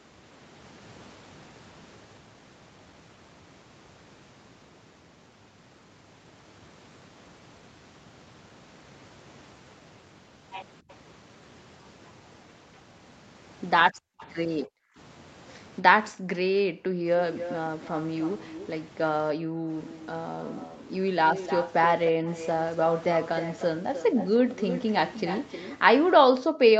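At 2.17 s there is a skip ahead. Playback jumps forward with no gap filled in. Roughly a second of sound is simply missing. The two sides are butted together almost directly. The stretch was dropped, either on the way or by the jitter buffer. The result is an abrupt cut. It cuts out the call's built-up delay in a single step.

From 2.27 to 3.10 s comes a jitter buffer speed-up. The audio runs at about 108 % speed. Pitch stays the same. The receiver still held more audio than it wanted. It trimmed short pitch-period pieces, one after another, removing around 70 ms in total. The passage sounds slightly rushed and compressed in time.

At 10.89 to 10.93 s a very faint echo leak appears. A copy of the speech returns 289 ms late. It likely comes from the far side's loudspeaker reaching its microphone past an echo canceller that did not fully remove it. Here it is only a brief scrap.

From 13.92 to 17.04 s the background is gated by the echo canceller. 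The room sound dips by up to about 40 dB, adding up to about a second of dropouts. The canceller clamped the microphone while the loudspeaker played. The noise floor vanishes and then returns.

Inside that stretch, at 14.19 to 14.27 s, a faint echo leak breaks through at 294 ms delay.

From 17.34 to 25.78 s the echo leak is present for a long stretch. The delayed copy trails the speech by about 303 ms.

During it, the background is gated again at 19.34 to 19.67 s and 22.12 to 22.25 s. It is gated once more at 26.18 to 26.64 s. Each time it drops by up to about 40 dB, briefly and sharply.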